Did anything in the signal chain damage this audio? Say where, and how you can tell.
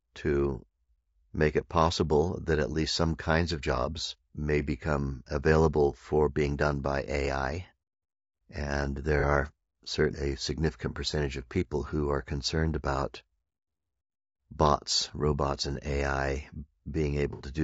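Yes, at the codec stage. The speech is rough and grainy all the way through, with noise filling the gaps between harmonics and a thin, synthetic-sounding top band. That's likely low-delay AAC compression (AAC-ELD): short frames resolve pitch poorly, and the damage fits a bitrate around 32 kbps.

There's also AAC frame loss with concealment, further down the chain. At 9.20 to 9.24 s, right before "are certainly a significant", there's a brief smeared, noisy patch, which fits one lost frame. At 17.33 to 17.42 s a longer smear fits two. The decoder patched both gaps from the last good spectrum.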